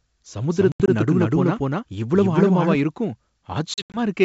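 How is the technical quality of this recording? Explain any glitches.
The recording has two distinct problems: a stretch where the speech is heard twice, and two bursts of dropouts typical of a packet-based call. The wideband telephone coding underneath, which sounds consistent with G.722 at 64 kbit/s, adds at most a faint upper-band hiss.

From 0.51 s to 2.75 s the speech is doubled. A second, full-band copy at about the same loudness trails the original by roughly a fifth of a second, so every syllable gets a hard, slapback-like repeat with no reverberant tail or room colour. The copy starts and stops abruptly at those points. This doubled audio track is likely caused by the same signal being captured a second time through a slower path and mixed back in.

Between 0.72 s and 0.89 s, and again between 3.74 s and 4.00 s, the speech breaks into hard-edged silent holes. The first burst removes about 100 ms of audio scattered across 160 ms. 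The second removes about 140 ms across 200 ms. In both, the longest single gap is 80 ms. This is packet loss on an ADPCM call, and the amount missing fits a handful of lost packets each time. Because ADPCM codes each sample as a difference from a running prediction, the decoder's predictor and step size lose track of the sender's during a gap. When sound resumes it comes back slightly distorted, then settles within some tens of milliseconds.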